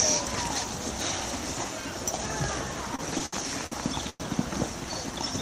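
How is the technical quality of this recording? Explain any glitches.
The recording is marred by two network-related timing faults in its second half, both of which stretch the audio rather than remove any of it.

From 2.93 s to 3.74 s there are repeated stalls (stutter). Packets reached the receiver more slowly than they were played out, so the jitter buffer emptied five times. Each time, the receiver extended the last sound to cover the wait, for 160 ms in total and about a fifth of that span, with the longest fill 66 ms. Nothing is lost, but the passage drags and hiccups.

At 4.10 s to 4.22 s there is a call audio freeze. For 102 ms the sound holds and buzzes on as a continuation of what preceded it, fading into about 20 ms of silence before the audio resumes exactly where it paused. The likely cause is packets held up in transit, leaving the jitter buffer empty until they arrived. The result is a 102 ms increase in delay from that point, with no content missing.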